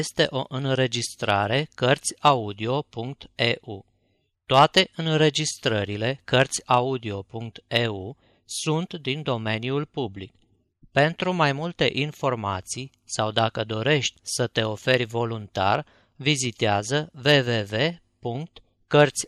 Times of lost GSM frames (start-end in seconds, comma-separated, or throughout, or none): none